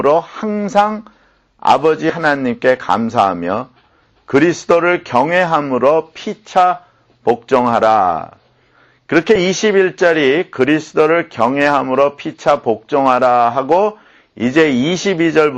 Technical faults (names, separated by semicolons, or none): compressed frames skipped